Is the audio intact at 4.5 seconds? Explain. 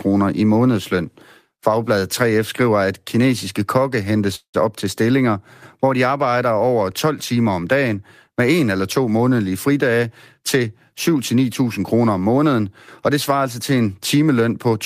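No. From 4.35 to 4.56 s, after "at kinesiske kokke hentes", there is a call audio freeze, likely because delayed packets emptied the jitter buffer. The last sound is stretched into a fading buzz or hiss, including 90 ms of silence. "op til stillinger hvor" then resumes 183 ms late, with nothing lost.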